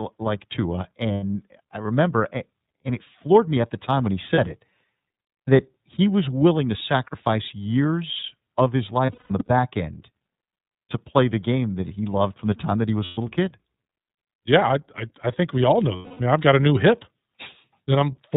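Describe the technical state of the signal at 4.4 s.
Right around there, the lost iLBC frames show up, spanning about 4.34 to 4.39 s, which fits a single dropped 30 ms frame. With the packet missing, the decoder fills the hole by looping the last pitch cycle blended with noise, so you hear a brief held, slightly buzzy vowel. Since each iLBC frame decodes independently, the speech snaps back to normal right after.

Underneath all that is the iLBC codec itself, at 13.33 kbps with 30 ms frames. It's narrowband, so there's nothing above 4 kHz, and the coding damage is plainly audible as a somewhat rough, synthetic edge on the speech.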